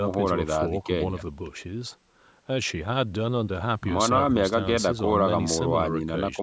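No technical faults occur at any point in this speech, which simply carries the ordinary bandwidth of call microphone processing, with nothing above 8 kHz.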